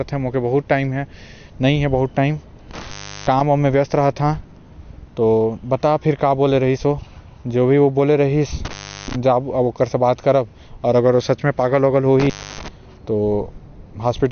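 From start to finish the speech carries MP3 compression artefacts: nothing sounds above 6.5 kHz, and the remaining detail swirls and goes watery, likely from an MP3 encode at a low bitrate around 50 kbps. A spectrogram shows a hard ceiling at 6.5 kHz with flickering, patchy gaps below it.

An intermittent contact breaks the signal at 2.71–3.41 s, 8.65–9.16 s and 12.20–12.68 s. Each time the line opens for about 0.36, 0.35 and 0.28 s, dropping the sound to faint hiss between crackles. The waveform shows near-flat gaps with sharp spikes at their edges.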